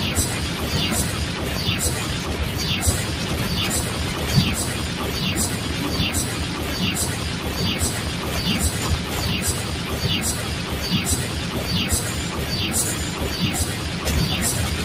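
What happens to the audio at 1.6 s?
At 1.57 s a DC step shifts the waveform's zero line abruptly, producing a brief low thump; the offset then decays away as a 20 Hz high-pass drains it.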